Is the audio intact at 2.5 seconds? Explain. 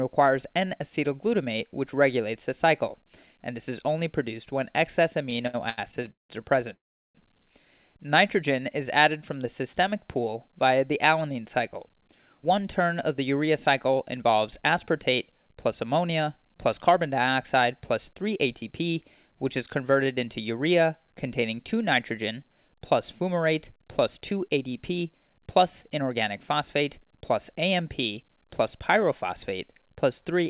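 Yes, the audio is intact at 2.5 seconds, with nothing there beyond the narrowband sound of the call path, which carries no content above 4 kHz.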